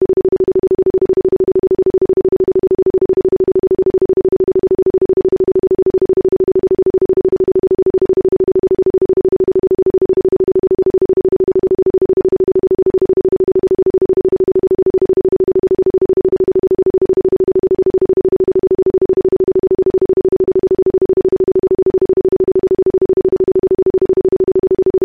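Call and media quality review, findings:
No faults found in this recording.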